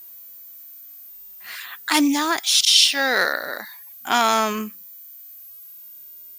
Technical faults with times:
0.00-6.39 switching supply whistle

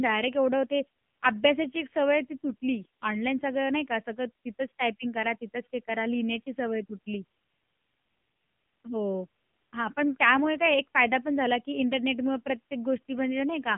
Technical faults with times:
0.00-13.77 AMR narrowband mobile codec

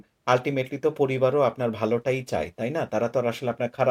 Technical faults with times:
none

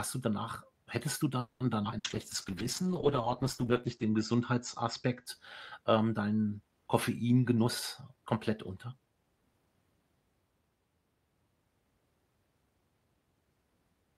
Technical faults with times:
1.39-1.63 call audio freeze
1.84-1.95 skip ahead
1.98-2.07 burst of packet loss
2.02-5.32 call bitrate drop
2.51-3.22 jitter buffer slow-down
3.73-5.41 jitter buffer slow-down
7.56-9.43 jitter buffer speed-up

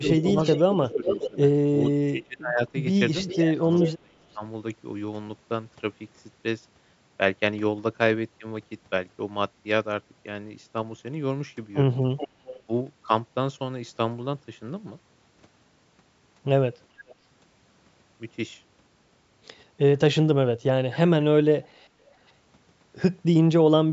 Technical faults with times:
0.01-4.44 speech suppressed in double talk
0.11-1.91 echo leak
3.28-3.92 echo leak
12.17-12.62 echo leak
17.08-17.15 echo leak
20.70-21.26 speech suppressed in double talk
22.06-22.31 echo leak

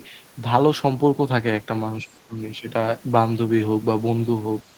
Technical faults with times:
2.01-2.39 speech suppressed in double talk
4.65-4.70 speech suppressed in double talk

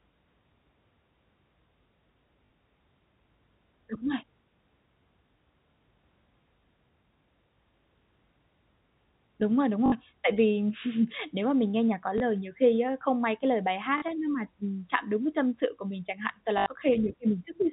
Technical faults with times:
2.46-2.50 packet loss with last packet repeated
9.86-9.92 packet loss with last packet repeated
12.18 packet loss with last packet repeated
13.98-14.02 packet loss with last packet repeated
16.58-16.66 packet loss with last packet repeated

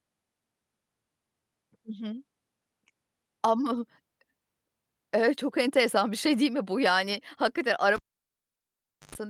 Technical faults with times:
7.13-7.15 lost packet rebuilt from error correction
7.96-9.15 cable pulled and plugged in

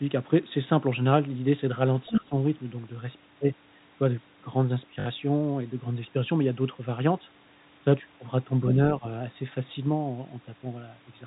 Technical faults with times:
2.07-2.21 other side's voice leaking through
2.09-2.34 speech suppressed in double talk
5.00-5.06 packet loss with last packet repeated
8.99-9.04 speech suppressed in double talk

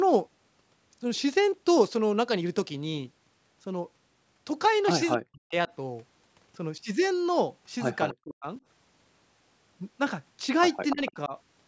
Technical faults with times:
5.13-5.17 echo leak
5.19-5.69 speech suppressed in double talk
8.12-8.46 speech suppressed in double talk
10.90-11.12 echo leak
10.93-11.34 speech suppressed in double talk

